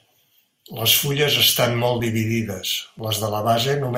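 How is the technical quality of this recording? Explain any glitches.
The speech has two small glitches, one second apart. At 2.00 s, just after "fulles estan molt", and at 2.99 s, after "fulles estan molt dividides", an overlap between stream segments lands on the 1.0 s segment boundaries. The player trims a few milliseconds of genuine audio where timestamps overlap, so the waveform jumps, heard as a tiny skip.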